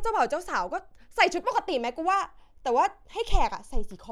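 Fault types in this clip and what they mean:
No faults detected on this speech recording; nothing to report.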